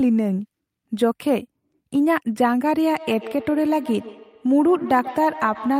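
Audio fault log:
2.92–5.79 s, feedback echo between two devices. The speech returns at a fixed delay of about 150 ms, peaking about 14 dB below the speech. A second device in the room replays this audio, and the other device's microphone feeds it back into the call.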